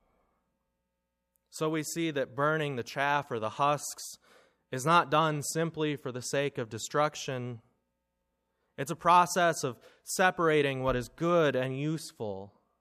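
No technical faults are audible.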